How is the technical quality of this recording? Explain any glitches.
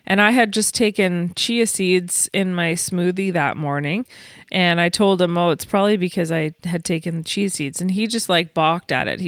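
Listening to the recording, nothing stood out as a technical problem, so there are no glitches to explain.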